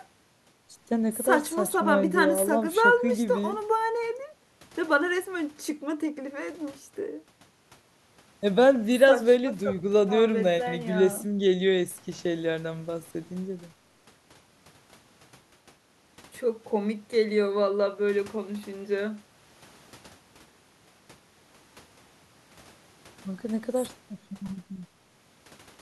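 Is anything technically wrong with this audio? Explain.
No, nothing is technically wrong with this audio.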